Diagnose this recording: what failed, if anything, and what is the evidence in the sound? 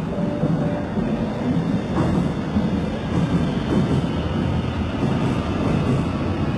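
The codec stage failed, most likely through HE-AAC compression at a very low rate, near 16 kbps. Throughout, the treble is bright but synthetic, gritty and metallic, and stops dead at 11.7 kHz. Spectral band replication copies lower bands upward, unlike a plain low-pass, which dulls.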